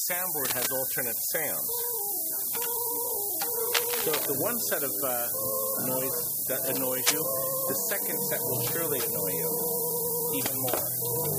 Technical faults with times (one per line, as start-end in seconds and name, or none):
0.00-11.38 low bit depth with noise shaping
0.45-0.67 cable scratch noise
3.68-4.27 cable scratch noise
7.06-7.22 cable scratch noise